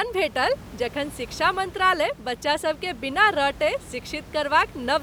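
Nothing stood out on listening to this speech clip; the only thing in the background is the room's own noise, sitting about 19 dB below the speech.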